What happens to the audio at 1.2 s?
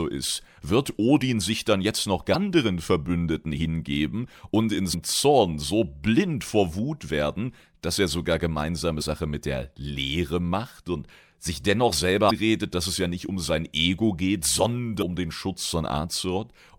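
Nothing goes wrong at 1.2 s; the speech plays through that moment intact, with no dropout, click, distortion or other audible fault.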